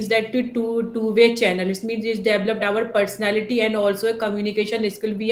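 From 4.92 to 5.03 s, a faint echo leak appears. A very quiet copy of the speech returns 274 ms late, likely from a loudspeaker echo canceller missing some pickup.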